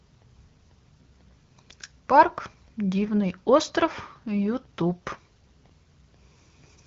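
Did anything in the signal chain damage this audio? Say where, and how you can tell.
No, nothing in the chain has damaged this speech: it has passed through the AMR wideband (HD Voice) codec at 12.65 kbit/s, which leaves it clear with only light coding character and nothing above about 7.2 kHz, as that path normally produces.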